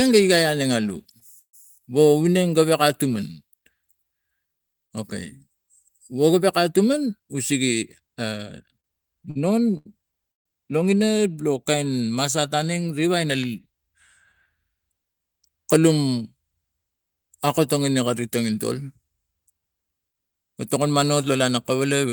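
At 1.19 to 1.23 s the speech hangs briefly: a short stall from a late packet, where the jitter buffer ran dry and the receiver held the last sound for 17 ms until the packet arrived. It is heard as a slightly drawn-out sound with a faint buzz, and nothing is skipped.

From 1.39 to 1.55 s there is a call audio freeze. The last sound is carried on as a fading buzz and then drops to silence for about 90 ms, 141 ms in all. The likely cause is packets held up in transit that emptied the buffer. Speech resumes where it stopped.

Between 6.99 and 8.08 s a jitter buffer speed-up runs the speech at 107% with unchanged pitch. The receiver trimmed pitch-period-sized pieces, about a tenth of a second in total, to shed excess buffered delay, so the delivery sounds hurried.

From 8.80 to 10.47 s there are repeated stalls (stutter): four separate gaps where the buffer emptied and the last sound was stretched, 315 ms in total, the longest 140 ms. 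About 19% of that stretch is concealed audio, so the speech drags and catches.

From 21.48 s to the end of the clip, a second jitter buffer speed-up at 107% removes about a twentieth of a second, again making the speech sound slightly rushed.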